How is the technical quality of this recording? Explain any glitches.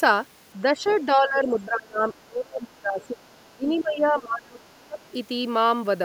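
The recording has clear technical problems. Echo-control faults affect most of the clip.

From 0.73 to 4.99 s, the speech is suppressed in double talk. The talker's voice dips by up to about 25 dB for roughly four seconds. The likely cause is an echo canceller that could not tell the talker from loudspeaker echo, so it turned both down.

The other side's voice leaks through at 0.85–0.98 s, 3.01–3.82 s, 4.62–4.67 s and 4.99–5.11 s. These faint second-voice scraps sit about 25 to 40 dB below the speech. They are likely loudspeaker playback that the echo canceller failed to remove from the microphone.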